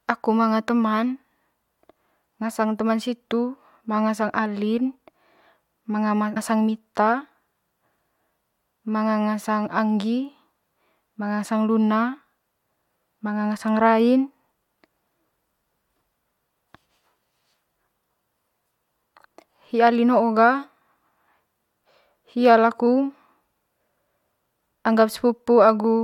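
Damaged data in a compressed stream hits this speech recording from 6.34 to 6.37 s: corrupted bytes make the decoder misread frames and lose sync, producing a brief glitch.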